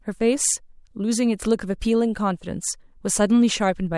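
No technical faults are audible.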